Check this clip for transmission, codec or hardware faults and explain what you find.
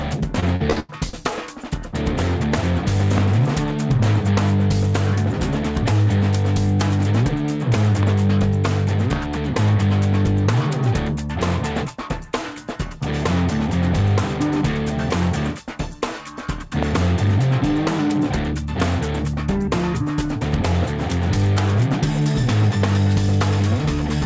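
Two kinds of fault are audible: a short burst of repeated packet loss near the start and four isolated loud pops later on.

Repeated packet loss (robotic sound), 0.40 to 1.15 s. Five gaps open in this stretch, the longest about 89 ms, and roughly a third of the span is concealment rather than real audio. Each missing piece is bridged by extending the preceding sound, and the next loss arrives before the signal recovers. The result is choppy, robotic audio with pieces missing.

Loud pop, at 3.18, 8.03, 9.13 and 16.83 s. Each is a single sharp pop, roughly 15 dB above the surrounding audio, and the sound continues underneath. The likely cause is a sudden voltage step or pulse entering the signal, from a plug, a switch, static discharge or a driver glitch. Downstream circuitry shapes that pulse into the short, percussive crack heard here, lasting only a few hundredths of a second each time.

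The call path's band limit, with nothing above 8 kHz, fits wideband G.722 coding at 64 kbps.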